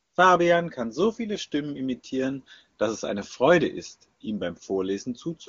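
No technical faults are audible.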